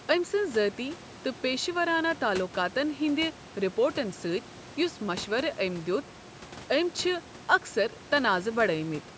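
Speech, with no technical faults to report.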